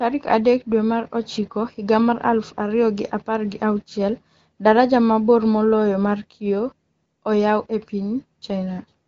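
No technical faults are audible.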